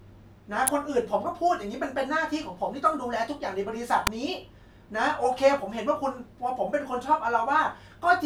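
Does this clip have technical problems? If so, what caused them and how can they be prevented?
Yes. Two sharp snaps sit on top of the speech, at 0.67 s and 4.07 s, each only about 5 to 12 milliseconds long and peaking around -5 dBFS. These are electrical switching spikes, likely from a nearby switch, motor or static discharge arcing briefly and inducing a transient into the audio line. Preventing them means keeping cable runs away from switched loads and motors, using balanced, well-shielded cabling with sound grounding, and fitting suppression on noisy switching equipment.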